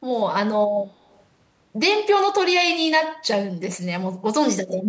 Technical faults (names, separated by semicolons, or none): echo leak